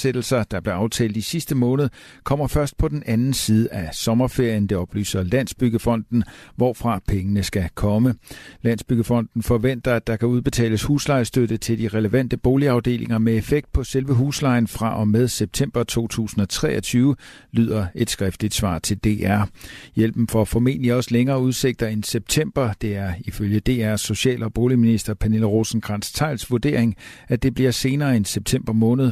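No technical faults can be heard at any point in the recording.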